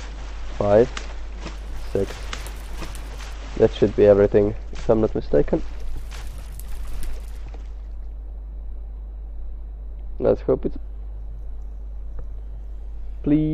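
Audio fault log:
10.75 s, damaged data in a compressed stream: a brief glitch lasting just under a fiftieth of a second. Corrupted bytes made the decoder misread a frame and lose sync until it found the next frame header.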